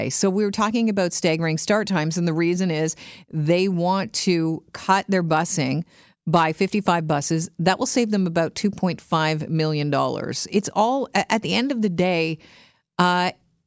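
No technical faults can be heard anywhere in the speech recording.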